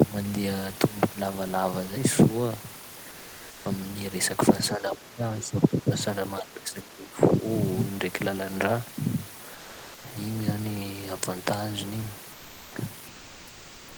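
Between 4.76 and 5.23 s, 5.4 and 5.91 s, and 6.4 and 7.45 s, the speech dips by up to about 20 dB, then about 10 dB. This is speech suppressed in double talk, likely from an echo canceller ducking both sides. The waveform shows a pinched envelope.

From 9.54 to 10.04 s, sound dropped by the voice detector cuts about 220 ms of speech. Comfort noise fills the gap, likely from discontinuous transmission such as Opus DTX.

From 12.32 to 12.75 s, and from 13.07 s to the end, comfort noise in place of the background swaps the room noise for smooth noise about 2 dB quieter. This is likely DTX again, and it shows as uniform spectrogram grain.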